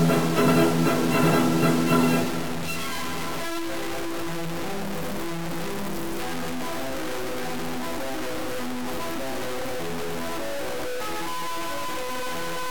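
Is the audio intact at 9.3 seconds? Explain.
No. At 9.3 seconds, as throughout, the sound is grainy and gritty, likely low bit depth without dither: truncation to 4 bits leaves signal-tracking distortion only about 10 dB down.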